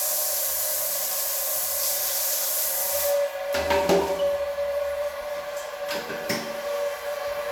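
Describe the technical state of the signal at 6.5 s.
At 6.5 s the signal is intact, with no dropout, clipping, distortion or other fault to be heard in the sound at that point.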